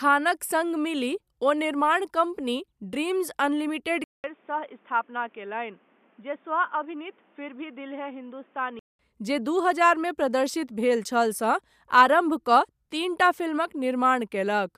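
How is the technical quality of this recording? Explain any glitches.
The recording has one clear glitch, in the middle of the speech.

An input switched to a poorer device from 4.04 to 8.99 s is the likely cause. A short gap of about 200 ms marks the change, and the sound turns dull and boxy because nothing reaches above 3.6 kHz. It drops roughly 10 dB in level and carries a new background noise around 30 dB below the speech. These are the narrower band, lower gain and own noise floor of a different microphone or headset profile. At 8.99 s the full, clearer sound returns.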